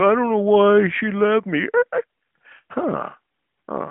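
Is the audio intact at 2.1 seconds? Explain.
Yes, at 2.1 seconds the audio is intact, with nothing heard there beyond the narrow telephone band of the AMR narrowband mobile codec, which passes nothing above about 3.8 kHz.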